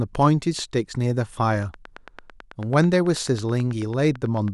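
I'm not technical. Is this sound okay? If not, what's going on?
No. From 1.63 to 4.49 s there's a train of clicks: about 30 near-identical ticks, steady at roughly nine per second, even in pauses. That steady, repeating pattern sets it apart from a single random pop, and likely comes from electrical interference or a faulty connection or power supply.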